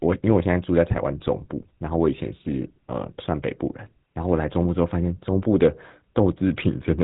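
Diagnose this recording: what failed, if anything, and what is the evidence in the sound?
The codec stage is the culprit: GSM full-rate coding across the whole clip. The speech has that buzzy, gravelly roughness and nothing above 3.8 kHz, which fits the old 13 kbps GSM scheme rebuilding the voice from a vocal-tract model fed with sparse, regularly spaced pulses.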